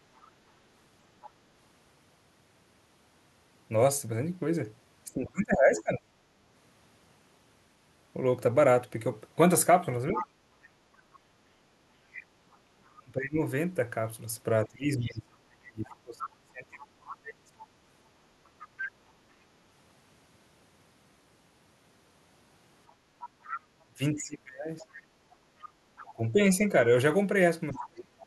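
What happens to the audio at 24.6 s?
At 24.6 s two problems overlap. The talker's device is playing the far end through a loudspeaker, and the echo canceller is likely failing to strip it from the microphone, so the other side's voice is leaking through. From 23.21 s to 27.79 s a second voice sits behind the main one, around 15 dB quieter.

From 23.87 s to the end at 28.26 s, both sides talk at once, and the echo canceller, likely unable to tell its own talker from the loudspeaker echo, turns everything down. That is speech suppressed in double talk. The main voice dips sharply, by as much as roughly 30 dB at its deepest, for about two seconds in total across that stretch while the far end keeps speaking.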